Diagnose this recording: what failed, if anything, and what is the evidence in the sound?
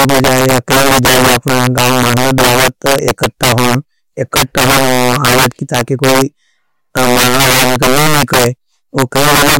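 Integer overflow in sample-format conversion: throughout the speech, loud peaks, pushed about 11 dB too hot, wrap to the opposite sign, giving violent cracks far sharper than clipping's flat-topped buzz.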